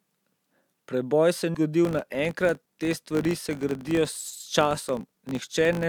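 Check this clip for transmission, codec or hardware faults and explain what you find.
Two faults are audible in this speech. At 1.53 s, compressed frames were skipped. About ten frames of roughly 23 ms each never reached the decoder, or the decoder rejected them as damaged, so the audio jumps ahead by about a fifth of a second.

From 1.85 s to the end, a filter restarts on every block. Its state resets to silence at each block boundary, so every block opens with a small transient. These repeat as a 50 Hz buzz, pointing to 20 ms blocks, and the buzz rises and falls with the speech level.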